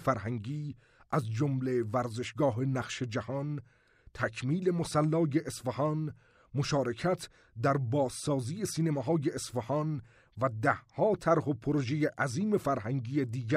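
No technical faults can be heard anywhere in the recording. There is nothing here that needs a time marked or a cause traced.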